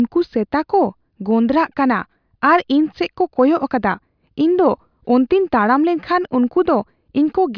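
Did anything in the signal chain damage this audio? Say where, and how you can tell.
No, nothing in the signal chain has left an audible mark on this speech recording, which holds steady level, continuity and bandwidth throughout.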